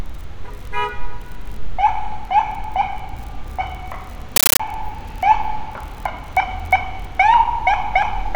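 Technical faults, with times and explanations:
4.36 to 4.60 s, compressed stream played as audio: for about a quarter of a second the sound is replaced by harsh, very loud chattering static. The digital link passed an encoded Dolby Digital bitstream, one that fits a 640 kbps AC-3 stream, straight through as if it were samples. Each encoded frame plays as a 13.3 ms burst of noise followed by silent padding, repeating at 31.25 Hz. On a waveform this shows as dense blocks separated by flat gaps, and on a spectrogram as broadband vertical bars spanning all frequencies.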